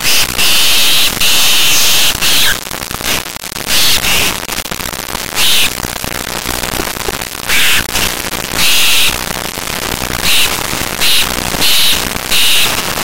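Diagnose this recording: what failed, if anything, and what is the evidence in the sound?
The failure is at the sample-format conversion stage: integer read as float, throughout the clip. 32-bit integer samples interpreted as 32-bit float land near zero or far past full scale, so the output snaps between silence and the clip limit. The result is a harsh, loud square-wave buzz, unlike ordinary overload clipping, which still follows the original waveform.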